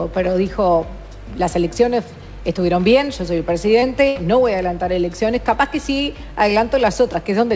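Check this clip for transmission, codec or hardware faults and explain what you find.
Two transmission faults stand out, both from packets that failed to arrive, and both fall where the audio was passing through a call codec whose bandwidth stops at 8 kHz, which fits G.722.

From 3.80 to 3.84 s there is a brief smear, a wobble where the sound should move on cleanly. This is short concealed packet loss: about 20 ms of audio never reached the decoder in time, so the receiver extended the preceding sound for roughly 21 ms to cover the hole and then crossfaded back into the real signal.

From 4.08 to 4.17 s the sound hangs and dies away rather than continuing, then picks up again further along with a piece skipped. That is a burst of packet loss: about 80 ms went missing in a row, longer than concealment can hide. The receiver synthesised about 74 ms by repeating the last sound while fading it down, so the gap comes out as a decaying hold, and whatever fell inside it is gone.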